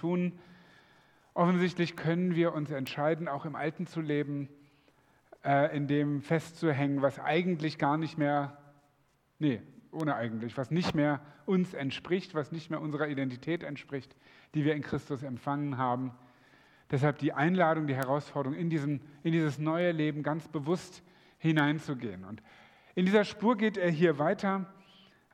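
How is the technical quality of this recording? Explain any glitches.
The recording has one real problem: a steady stream of word clock ticks from about 0.20 s right through to 25.16 s, landing roughly once a second. The receiving device is running on its own clock rather than locking to the digital feed. The two clocks drift apart by what sounds like a few tens of parts per million, so each time they slip past each other a single sample gets dropped or doubled. That leaves a sharp tick of uneven strength, over and over.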